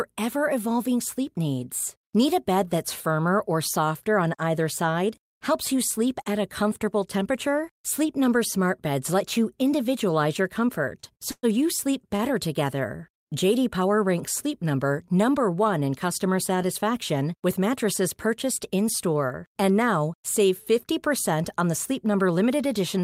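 At 11.00–11.05 s, just after "let you individualize your", a short stall from a late packet holds the last sound about 27 ms with a faint buzz or dip, adding delay.

At 11.31–11.45 s a call audio freeze stretches the sound into a fading buzz or hiss ending in 50 ms of silence, likely from delayed packets draining the jitter buffer.

At 22.06–22.52 s a jitter buffer speed-up trims about 40 ms of pitch periods, so the speech runs at 108% speed at unchanged pitch and sounds hurried.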